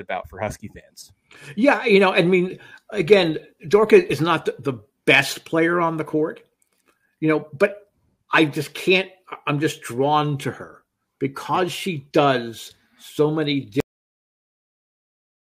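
At 13.80 s the audio has a cut-off end: the final buffers were never written, so sound stops mid-event and falls straight to digital silence without any decay.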